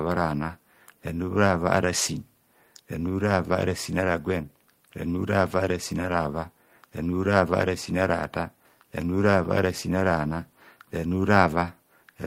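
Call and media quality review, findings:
No audible faults found in this speech recording; no dropouts, clipping, glitches or level problems to attribute to any component.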